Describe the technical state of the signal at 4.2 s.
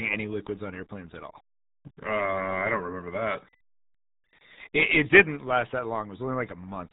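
RealAudio 14.4 codec damage is present at 4.2 s, as it is across the entire clip. This early dial-up speech codec squeezes the signal into a tiny data budget, and the heavy artefacts fit an 8 kbit/s stream. Everything above 3.9 kHz is gone, so the speech sounds muffled and boxed-in. The coarse modelling of the remaining band adds a gargly, watery texture to every syllable.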